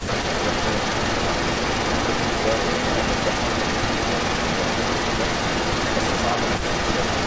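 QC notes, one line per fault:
Throughout, echo leak: a second copy of the speech trails by 0.23 s, about 5 dB louder than the original, likely loudspeaker pickup the echo canceller missed.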